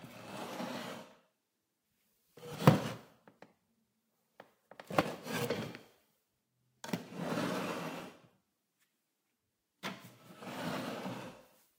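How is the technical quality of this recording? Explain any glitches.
The recording has four short glitches, at 0.30, 2.54, 5.01 and 8.00 seconds. Each is likely a dropped buffer (overrun): the recording program fell behind and the hardware overwrote samples before they were collected. That slice of audio is lost, and the sound on either side is spliced directly together. Each gap is heard as the sound jumping forward, with no silence. About 20 ms goes missing at the first two and about 70 ms at the last two.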